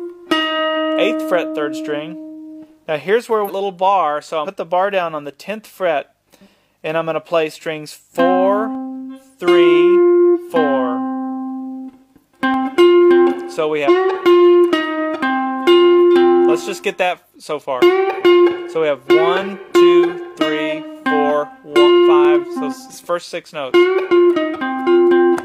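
At 3.44 s and again at 4.42 s, compressed frames are skipped. A run of 46.4 ms frames never reaches the output, so the audio jumps ahead by roughly 0.4 s.

At 8.75 s, a single sharp click marks dropped samples. The likely cause is a fraction of a millisecond going missing, which makes the waveform step abruptly without removing audible content. Another frame skip at 10.31 s cuts about a third of a second. A second click follows at 12.54 s.

At 13.84 s, a shorter skip drops about a fifth of a second. At 22.25 s, a third dropped-samples click appears. At 22.53 s, the largest frame skip removes roughly half a second.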